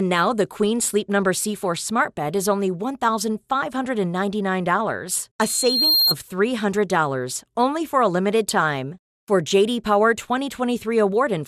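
The whole speech clip has a dull, gurgling, granular quality, with the top end flickering in and out. That's likely MP2 compression at a low rate, something around 80 kbps, where upper sub-bands keep getting switched off and the rest are coarsely quantised.

At 5.16 to 5.21 s there's a quick burst of noise blips, DAB burbling. Bit errors slipped past the error correction and put short blips of noise into single sub-bands, which points to a couple of corrupted frames. It happens again at 8.51 s, right after "only for a limited".

Just after the first burble, from 5.39 to 6.15 s, a loudspeaker feedback squeal comes in: a single 4.2 kHz tone that swells over about half a second until it sits a few dB above the speech. The mic was picking up its own speaker, and the loop gain at that frequency went past one.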